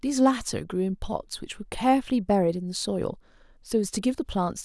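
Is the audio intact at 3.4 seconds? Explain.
Yes, the audio is intact at 3.4 seconds, with the speech running through that moment without any audible fault.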